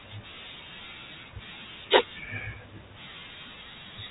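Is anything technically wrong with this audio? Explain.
No, nothing is technically wrong.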